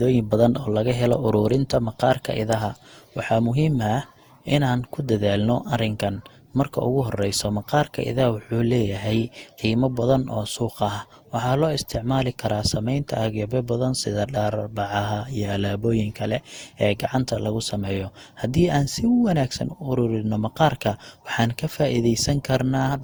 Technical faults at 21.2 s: generation loss

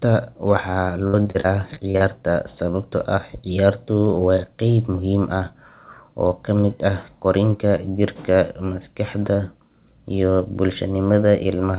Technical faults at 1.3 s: repeated packet loss (robotic sound)

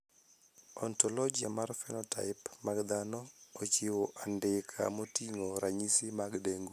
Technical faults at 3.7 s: none

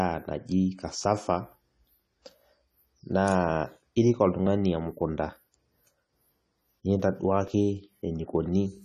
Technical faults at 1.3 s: AAC compression

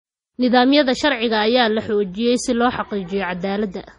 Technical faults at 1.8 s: MP3 compression

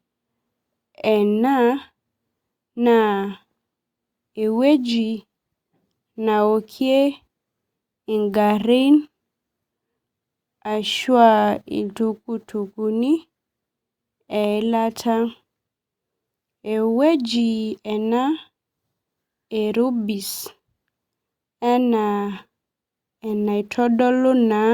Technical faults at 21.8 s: none

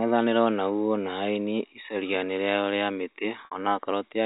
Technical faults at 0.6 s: none

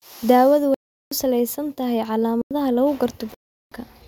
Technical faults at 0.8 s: block of digital silence

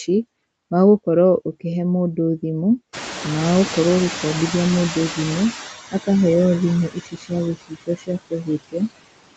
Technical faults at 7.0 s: noise suppressor artifacts; speech cut by the noise suppressor

